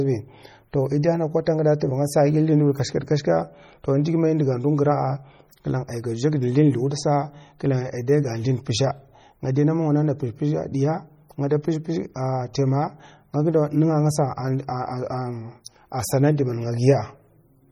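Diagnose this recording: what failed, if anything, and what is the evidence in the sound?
Codec stage: the speech sounds watery and swirly throughout, with chirping sibilants and smeared attacks, likely from heavy MP3 compression at a bitrate around 32 kbps.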